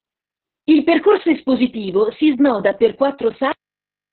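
A speech clip with Opus voice compression throughout. The sound is muffled, with nothing above 4.2 kHz. That narrowband limit points to the codec's lowest operating range. The voice is hoarse and slightly robotic. The damage is heavy, which fits a bitrate near 6 kbps using the SILK linear-prediction coder alone. That coder models the vocal tract and codes the excitation coarsely, so breathiness and buzz replace natural texture. At 3.52 s, right after "espositivo si snoda per", the clip has a cut-off end. The sound stops mid-utterance and drops straight to digital silence with no decay. The final buffers were never written, so nothing more plays from there to the end.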